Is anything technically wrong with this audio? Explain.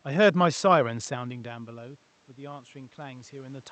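Yes. Automatic gain rising runs from 1.09 s to the end at 3.71 s. When the input level fell by about 17 dB, the gain control treated it as too quiet and raised its gain slowly, so the speech and room noise swell upward together.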